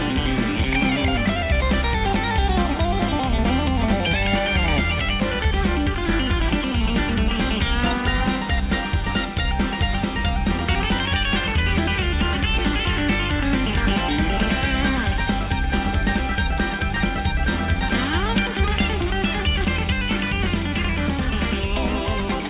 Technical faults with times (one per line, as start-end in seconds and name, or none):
none